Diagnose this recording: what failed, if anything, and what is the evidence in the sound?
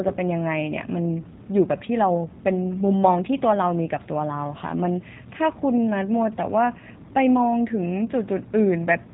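The codec stage failed: G.729 coding runs through the whole speech clip and is plainly audible. Nothing reaches above 4 kHz, and the speech has a rough, synthetic edge throughout. Each 10 ms frame is rebuilt from a vocal tract filter, a pitch predictor and a few pulses, which fits an 8 kbit/s stream.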